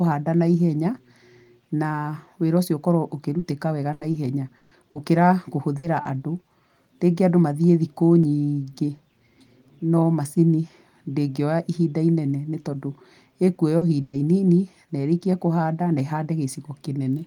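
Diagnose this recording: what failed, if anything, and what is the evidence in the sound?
Network stage: repeated packet loss (robotic sound) from 3.39 to 4.97 s. Five gaps, longest 140 ms, are patched by extending prior sound, giving choppy audio with pieces missing.

Network stage: burst of packet loss at 5.77 to 5.85 s and 14.01 to 14.15 s. Concealment holds then fades the last sound for 60 and 120 ms before audio resumes later.

Network stage: short concealed packet loss at 6.03 to 6.07 s and 13.77 to 13.83 s. Brief holes are filled and blended back, heard as a quick smear or wobble.

Buffer stage: a tiny skip at 8.24 s drops a few milliseconds with no silence. Audio missing between chunks is the likely cause, consistent with 5-second recording chunks.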